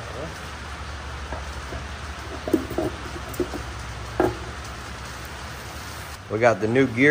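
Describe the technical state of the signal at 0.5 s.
At 0.5 s the signal is intact, with no audible fault at that point.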